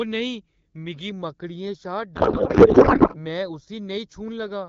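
From 1.1 s to the end there's channel delay (comb filtering). One channel lags by roughly a fifth of a millisecond, so the mono sum picks up fixed notches starting around 3 kHz and sounds hollow and phasey. Between 2.15 and 3.23 s a codec payload misread sets in: the decoder takes the AMR-WB bits in the wrong packing, which fits octet-aligned frames being read as bandwidth-efficient, so the speech dissolves into garbled warble and noise.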